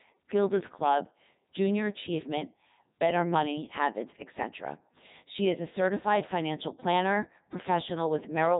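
From start to end the speech carries heavy Codec 2 vocoder damage, robotic and buzzy, consistent with its 3.2 kbit/s mode. Only pitch, voicing, energy and envelope survive, so sine-wave resynthesis replaces the waveform: rigid, comb-like harmonics on the spectrogram, smeared consonants and a regular, synthetic-looking waveform.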